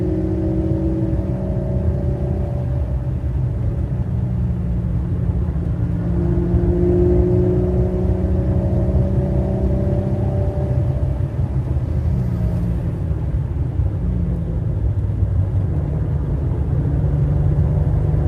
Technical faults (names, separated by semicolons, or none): none